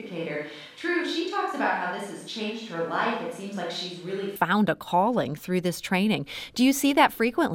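Until 4.36 s the speech is roomy, hollow and thin, about 5 dB quieter. That likely marks a switch to a distant microphone.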